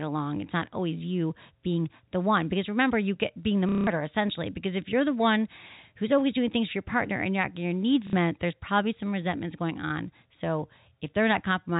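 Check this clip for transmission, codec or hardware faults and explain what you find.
Two dropouts show up, both packet loss with the last packet repeated. The first runs from 3.69 to 3.87 s, after "you get being the" and before "essentially because if you're". The second runs from 8.07 to 8.13 s, after "not getting your needs" and before "there's probably some resentments". The receiver replays the last packet to fill each gap. The 180 ms gap buzzes as a short robotic stutter, which fits packets about 30 ms long. The shorter gap is a brief stutter. The speech is bandlimited to 4 kHz, as expected for G.711 telephone coding.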